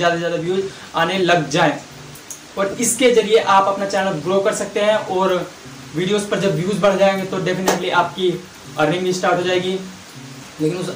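At 2.72 s there is a brief dropout from lost LE Audio frames. About 15 ms of audio went missing, which fits two lost frames. The LC3 decoder filled the gap by repeating the last spectrum with randomised signs. The loss is short, so there is no long fade toward silence. What you hear is a tiny noisy smear where the sound briefly loses its clarity. The light lossy compression leaves at most a faint watery texture.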